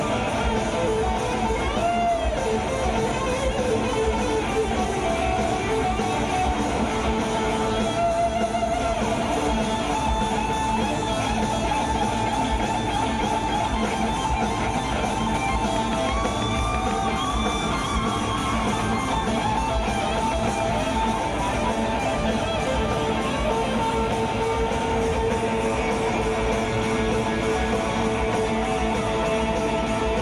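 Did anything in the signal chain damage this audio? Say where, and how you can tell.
Yes. From 15.76 to 17.26 s a train of clicks ticks over the sound, about ten near-identical pops at a steady 6.1 per second, standing well above the programme. This regularity likely points to interference coupling into the analogue wiring from nearby equipment.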